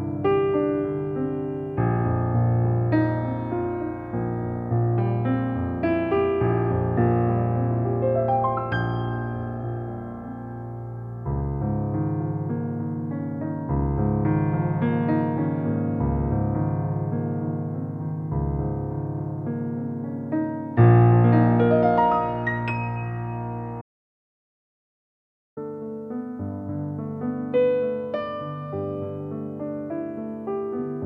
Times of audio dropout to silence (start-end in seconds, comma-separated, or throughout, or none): 23.81-25.57